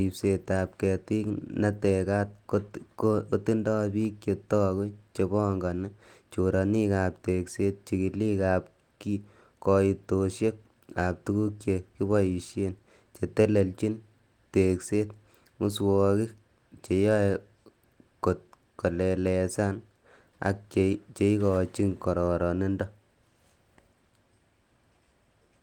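Nothing goes wrong anywhere in this speech clip, so there's no technical fault to point to.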